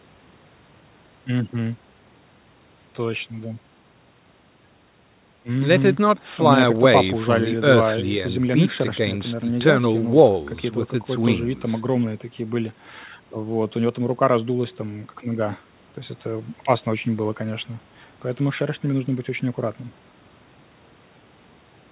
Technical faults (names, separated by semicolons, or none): none